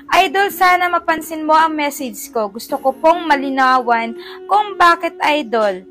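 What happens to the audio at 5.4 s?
Nothing goes wrong at 5.4 s; the audio carries on intact through that moment.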